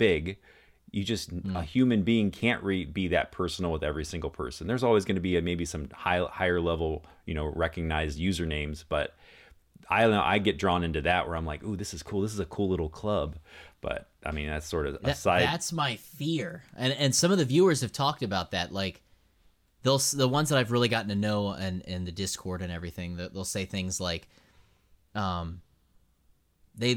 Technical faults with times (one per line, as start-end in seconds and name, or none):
15.49-16.54 channel delay (comb filtering)